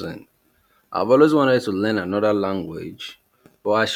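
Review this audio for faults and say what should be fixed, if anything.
Nothing in this speech recording needs fixing. No faults turn up anywhere in the audio, so no repair or prevention step is called for.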